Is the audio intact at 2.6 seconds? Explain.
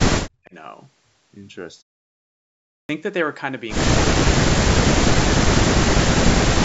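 No. From 2.56 to 2.89 s the sound bursts in abruptly out of silence with its opening missing, a clipped start after a pause. About 330 ms is swallowed because the output device slept during the 0.82 s pause and needed time to wake.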